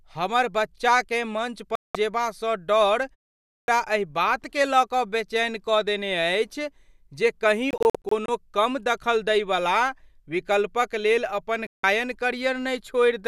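At 1.75 to 1.95 s a digital broadcast dropout mutes the speech for about 192 ms, consistent with a run of corrupted frames. Unlike a pause, it cuts into ongoing sound, and everything sent meanwhile is gone. At 3.48 s a clipped start after a pause follows a 0.41 s silence: the output device apparently slept and woke late, so the first 201 ms of the next sound is swallowed and it begins abruptly. Further dropouts come at 7.71 to 8.29 s, as several short holes up to 48 ms long totalling 192 ms, and at 11.67 to 11.84 s, a 168 ms gap.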